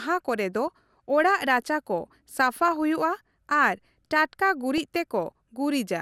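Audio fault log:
0.67, 2.68–2.77 and 4.78–4.81 s, DAB burbling: weak reception let bit errors slip past the error correction into the MP2 audio data, at a residual rate that sounds to be around 0.07 to 0.15 percent. Corrupted samples put short blips of noise in single sub-bands and corrupted scale factors make sub-bands jump in level for up to a frame, so just after "ᱠᱚᱨᱮ ᱫᱚ" and at the two later points the speech gains short burbling blips, each burst spanning what fits four or five frames.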